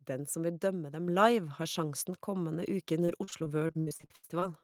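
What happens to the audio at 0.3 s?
Nothing goes wrong at 0.3 s; the speech plays through that moment intact.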